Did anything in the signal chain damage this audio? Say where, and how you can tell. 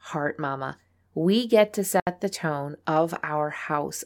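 Yes. At 2.0 s the speech drops into a dead hole of about 68 ms, then carries on exactly where it left off. That's a gap at a join of encoded pieces, so it happened at the codec stage. The audio was encoded as separate chunks and stitched back together untrimmed, so the encoder's start-up delay and last-frame padding both sit at the seam. The edges of the silence are smeared, which fits a codec boundary.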